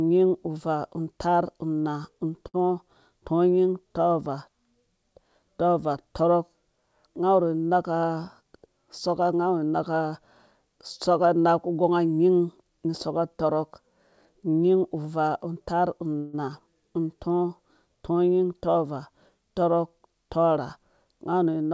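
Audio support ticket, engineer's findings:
Short stall from a late packet, 2.48–2.56 s, right after "uvaa taar unaa". Sound held about 58 ms, then resumes at the same point. Jitter buffer underran while one packet was late. Receiver stretched the last sound instead of dropping anything, so no audio lost, but playout delay grew by the same 58 ms.

Jitter buffer speed-up, three spots. 8.02–8.67 s, ending at "soka nga awu naka", runs at 109%. 18.31–18.85 s at 113%. 19.99–21.06 s at 106%. Each is hurried delivery at unchanged pitch. Buffer was holding excess audio after bunched packet arrivals. Receiver trimmed short pitch-period pieces repeatedly, around 70 ms per event, to bring latency back to target.

Call audio freeze, 16.18–16.35 s, after "unyin uvaa taar". Roughly 157 ms of concealment: the last sound carried on as a fading buzz or hiss, never reaching silence, then audio continued where it left off. 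Nothing missing, delay grew 157 ms. Likely cause: packets held up in transit, jitter buffer empty. Path shows no content above 8 kHz, consistent with G.722 at 64 kbps.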